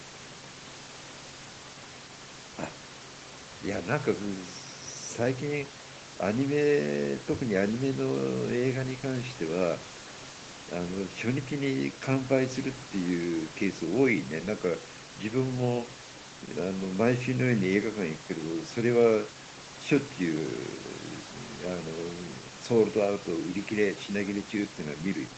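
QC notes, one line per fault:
The speech sits about 18 dB above the room's background noise and carries nothing above 8 kHz, consistent with a call's microphone processing and an Opus-coded WebRTC path working as designed, and there are no faults.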